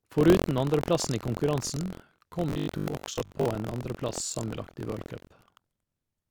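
A speech clip in which the writing program and the playback hardware have slipped against each other on the ring buffer, so they cross inside every period. That buffer tearing leaves a small slice of each buffer holding audio from roughly a tenth of a second earlier, hard-joined on both sides. The result is a steady rattling buzz at 43.1 Hz, which fits a 1024-sample buffer, running through the whole clip wherever there is signal. From 2.50 to 3.46 s, new audio likely arrives too seldom, and the gaps are filled by replaying the last short buffer while about half the real audio is skipped. This robotic sound from repeated short buffers stamps a rigid 50 Hz metallic buzz onto the speech, which still roughly follows its contour.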